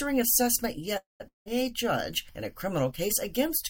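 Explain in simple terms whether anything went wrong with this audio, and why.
Three things go wrong. At 0.97 to 1.22 s there is a call audio freeze. The sound stretches into a fading buzz and then silence. It resumes with nothing lost, likely because delayed packets stalled playback.

At 1.28 to 1.48 s comes a long network dropout. Again a fading buzz turns to silence. This time about 0.18 s of sound is skipped, likely lost in transit.

At 2.91 to 2.99 s, one channel drops out. The sound briefly becomes noticeably quieter, likely because one stereo side went missing.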